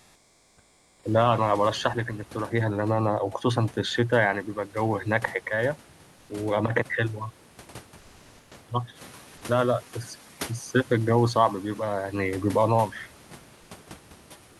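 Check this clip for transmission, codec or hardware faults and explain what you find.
Two kinds of fault are audible in this speech clip: comfort noise replacing the background twice, and a noise suppressor catching up once.

Comfort noise in place of the background, 0.00–0.97 s and 7.99–8.47 s: during these pauses the real background gives way to a steady, featureless hiss, likely from discontinuous transmission with the receiver synthesizing noise. On a spectrogram it appears as a smooth, uniform band. The first stretch sits about 8 dB lower, and the second matches the surrounding level.

Noise suppressor catching up, 8.95–9.30 s: the room noise jumps by about 14 dB near 9.0 s, and the suppressor's noise estimate lags. The noise passes through under-reduced at first, then sinks by about 4 dB over 350 ms, which looks like a brief bright patch fading on a spectrogram.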